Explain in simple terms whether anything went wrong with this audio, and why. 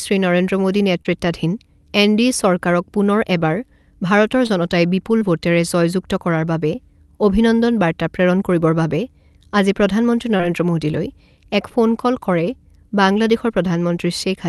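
You can hear short concealed packet loss at 1.01, 4.47, 5.19 and 10.37 s: tiny gaps in the call audio got patched by guessing, leaving brief smears or wobbles.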